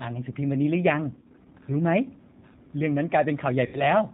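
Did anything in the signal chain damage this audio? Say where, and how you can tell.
Yes. Codec stage: speech sounds rough and synthetic throughout, with nothing above 4 kHz. That fits the G.729 codec at 8 kbit/s.

Network stage: VoIP packet loss concealed by the speech codec, at 1.15–1.47 s and 3.66–3.88 s. The decoder extrapolates the missing frames, so speech turns into a buzzy tone or coloured noise and fades.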